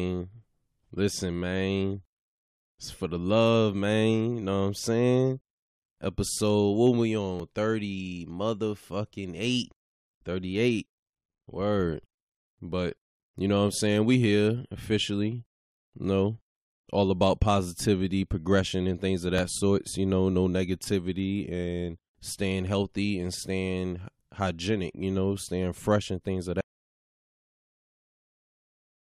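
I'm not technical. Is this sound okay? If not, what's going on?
No. Overlap between stream segments at 7.40 s, after "what we", and at 19.39 s, after "progression and things of": two pieces of the recording were joined with a sliver of sound cut away, causing a tiny click or skip.

Audio dropout to silence from 26.61 s, after "fresh and things of", to the end: the sound cuts to complete silence, likely because the input connection was lost while recording continued.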